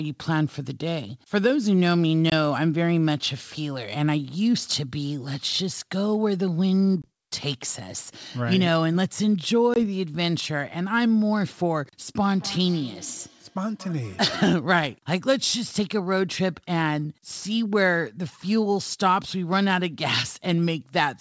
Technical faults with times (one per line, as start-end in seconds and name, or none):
2.30-2.33 packet loss on an ADPCM call
7.02-7.06 packet loss on an ADPCM call
9.74-9.76 packet loss on an ADPCM call
12.21-14.66 feedback echo between two devices